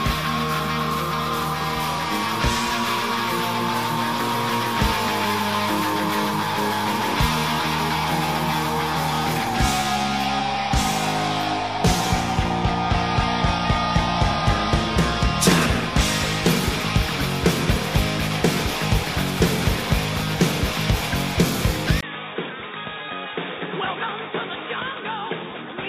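At 22.01 s a 20 ms gap opens. From there to the end, nothing passes above 3.8 kHz, the level falls about 10 dB, and a new noise floor sits roughly 40 dB down. Unlike a plain filter, this points to the input likely switching to a poorer device.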